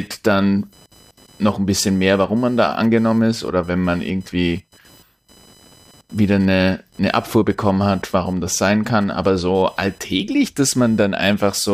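Computer activity noise runs throughout the speech, a faint buzzing and chirping that sits about 35 dB below the signal. Its pulse rate is roughly 1 kHz, which gives it a high, thin whine rather than a low hum. It comes from load changes in the computer's processor, graphics or peripherals disturbing the ground shared with the audio circuit. Because of that, its rhythm follows the machine's activity and is unrelated to the speech.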